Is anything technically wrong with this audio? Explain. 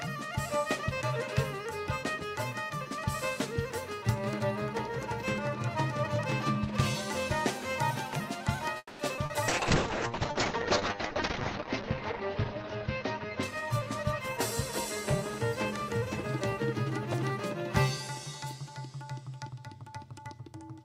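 Yes, four kinds of fault are audible, clustered around the middle of the clip and again near the end.

From 8.77 to 9.02 s there is a call audio freeze. The last sound is stretched into a fading buzz for about 220 ms, including roughly 40 ms of near-silence, before the audio resumes where it left off. Nothing appears to be lost; the stream is simply delayed. The likely cause is packets held up in transit, so the jitter buffer ran dry and the receiver had to improvise until they arrived.

Right after that come two short concealed packet losses: a single 20 ms event at 9.16 s and a 40 ms one from 9.26 to 9.32 s. Those slices of audio never reached the decoder in time. The receiver extrapolated from the preceding sound and crossfaded back into the real signal, so each one is heard as a brief smear or wobble rather than a hard dropout.

From 9.48 to 16.23 s there is a call bitrate drop. The bandwidth estimate collapsed, and the encoder was pushed from a high rate down to what sounds like only a few kbps, holding at the bottom for about 1.9 s. 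Coding becomes coarse and watery, and the top end is cut from about 20 kHz to 8 kHz, leaving the sound muffled until the rate climbs back.

From 19.42 to 20.56 s there is a jitter buffer speed-up. Too much audio had accumulated in the buffer, so the receiver repeatedly cut out short pitch-period chunks, removing about a fifth of a second in total. Playback runs at roughly 119% of normal speed with pitch unchanged, giving the passage a hurried feel.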